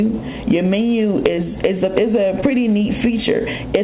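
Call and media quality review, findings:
Short concealed packet loss, two hits, ~1.36–1.45 s and ~2.41–2.44 s. Brief smear where the audio carries on, then rejoins. Jitter buffer / decoder PLC: about 20 ms of audio missing, 14 ms patched by extrapolating the last sound.

First one also stretches the timeline a bit, roughly 10 ms extra. Band stops at 4 kHz, as expected from a G.711 mu-law leg.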